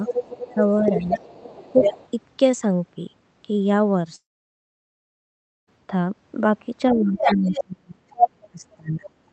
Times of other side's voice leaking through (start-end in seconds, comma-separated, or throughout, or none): 0.05-0.54, 0.87-2.09, 7.19-7.65, 8.16-8.30